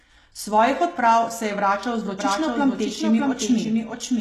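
A speech clip with two problems. Throughout, the treble has a synthetic, gritty edge and s sounds come out metallic and lispy, with the codec damage plainly audible, most likely from HE-AAC compression at a low rate, fitting about 16 kbps. Only the lower band is actually coded, and the upper band is rebuilt by copying lower bands upward under a coarse envelope, so harmonics fail to line up across the crossover. On a spectrogram the top half looks like a smeared, repeated copy of the region below it, and everything stops sharply at 12.4 kHz. From 2.19 s, right after "se je vračal z", a doubled audio track runs to the end. A full-band copy trails the original by roughly 0.7 s at about 5 dB lower, likely from a second, slower capture path or an edit holding two copies out of step. The copy cuts in abruptly with no decay or room colour. On a waveform, a second, smaller version of each syllable's envelope appears offset behind the first, and a spectrogram shows each speech pattern repeated about 0.7 s later.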